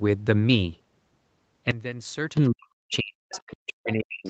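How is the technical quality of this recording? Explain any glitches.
The recording has clear faults from about 1.7 s onward, layered over a call-quality band limit, with nothing above 8 kHz on a spectrogram.

Sudden gain jump, 1.71 to 2.37 s: the level, including background noise, drops abruptly by about 15 dB. This is likely an unramped digital gain change, visible as a step-shaped block in the waveform envelope.

Speech suppressed in double talk, 2.51 s to the end: the talker's speech dips, at its deepest by roughly 40 dB. The echo canceller, likely unable to separate both talkers, turns everything down, which shows as weaker energy on the spectrogram.

Other side's voice leaking through, 2.92 to 2.96 s, 3.31 to 3.54 s and 4.25 to 4.29 s: faint scraps of a second voice appear, the middle one somewhat louder, likely residual loudspeaker echo. They show as weak, separate harmonic traces.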